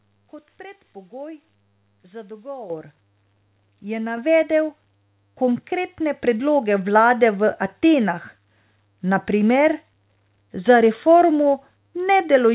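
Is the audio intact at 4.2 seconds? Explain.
No. A microphone volume step-up hits at 4.17 s: the call software judged the input too quiet and raised the microphone gain in a single step of about 5 dB. The voice and background noise jump louder together, within a phone-like band that stops at 4 kHz.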